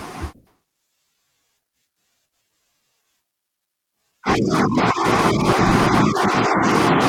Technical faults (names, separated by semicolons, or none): none